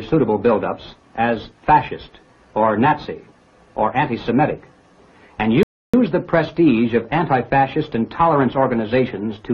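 At 5.63 s the audio drops to silence for about 0.30 s, a rebuffering stall: playback exhausted its downloaded buffer and paused until more data arrived. At 5.94 s the sound resumes exactly where it stopped, so nothing is skipped, but about 304 ms is added.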